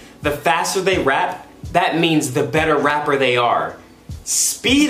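Three short skips break the audio, at 0.62, 1.70 and 2.90 s. At each one the sound jumps ahead with no gap. A few milliseconds go missing each time. The likely cause is a dropped buffer (overrun), where samples were overwritten before being read.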